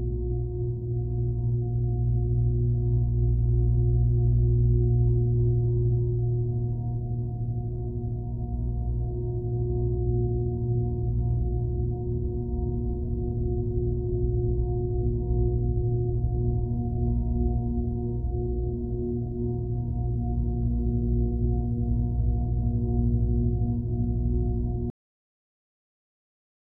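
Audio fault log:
24.90 s to end, cut-off end: the sound stops abruptly in mid-event at 24.90 s, with no decay or fade, and the final 1.87 s is silence. Nothing trails off naturally; the sound is simply severed. The cause is that the last stretch of audio buffers was never written or played out, so the recording or playback ended while sound was still coming through, leaving the clip to finish in dead air.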